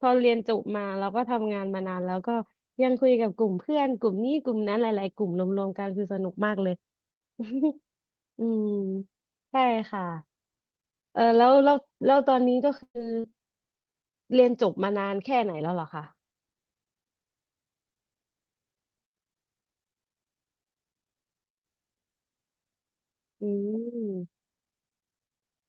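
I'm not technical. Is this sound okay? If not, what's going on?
No. The recording has two connection problems, both during the middle of the speech.

From 12.77 to 13.34 s there is repeated packet loss, which causes a robotic sound. Small chunks of the call arrived late or not at all, several times in quick succession. Each time, the receiving end covered the hole by stretching out the sound it had just played. The longest hole is about 0.12 s, and roughly a third of that half-second is filler rather than real audio, so the speech turns choppy and robotic.

Just after that, from 13.82 to 13.91 s, there is a single short concealed packet loss. About 40 ms of audio went missing, and the receiver patched most of it by continuing the previous sound before blending back into the real signal. The patch stretches the timing very slightly, by something like 15 ms. It comes across as a quick smear or wobble, and a short consonant at that point can be lost.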